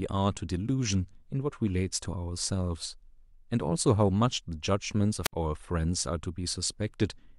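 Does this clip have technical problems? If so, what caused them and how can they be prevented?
Yes. At 5.23 to 5.33 s static rises, then the speech drops to near silence for about 65 ms: a wireless microphone squelch dropout, where weakening radio signal tripped the receiver's mute. Prevent it with clear line of sight, shorter transmitter-to-receiver distance, diversity receivers and fresh batteries.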